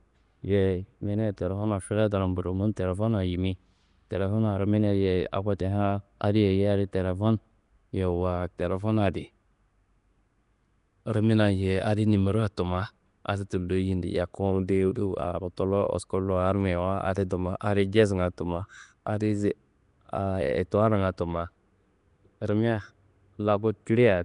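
From start to finish the speech carries a rough, hissy halo and a smeared, underwater quality, and nothing comes through above about 10.6 kHz. This is likely Nellymoser compression, the old Flash microphone codec. It works on short fixed blocks with a tight bit budget, so weaker bands get no bits and are filled with noise. That noise fill is the fizz you hear around the voice, and the damage is plainly audible.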